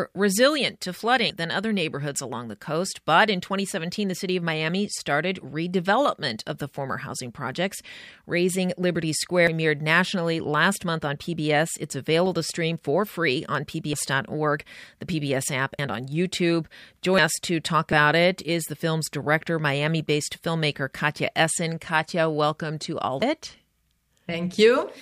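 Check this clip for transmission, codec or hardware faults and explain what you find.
The speech has six sudden jumps, most likely a dropped buffer (overrun) each time. They come at 9.47 s (just before "nationally last month on"), 13.93 s (after "stream for free on"), 15.79 s, 17.18 s, 17.93 s (between "us to talk" and "it is the film's") and 23.22 s. Samples were overwritten before being read, splicing the audio straight across a gap of roughly 100 to 200 ms. Unlike a dropout there is no silence, only a skip.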